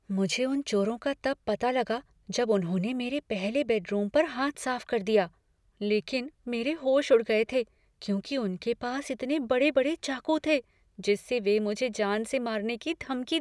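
No technical faults can be heard anywhere in this speech recording.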